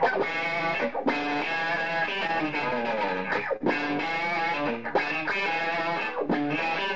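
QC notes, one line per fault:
2.27–2.31 s and 3.56–3.62 s, short stall from a late packet: each time a packet arrived after its playout time and the jitter buffer ran dry. The receiver held the last sound for about 18 ms, then about 37 ms, and resumed from the same point. Nothing is lost, but the sound briefly hangs with a faint buzz or dip.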